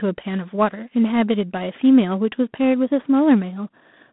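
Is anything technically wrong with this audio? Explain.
Yes. Throughout, the speech carries G.726 ADPCM damage: coarse difference-coding against a running prediction leaves a harsh, rasping hiss that rises and falls with the speech level, which fits 24 kbit/s. Unlike plain telephone band-limiting (150 Hz to 3.6 kHz, nothing above 3.8 kHz), it adds this level-tracking grit.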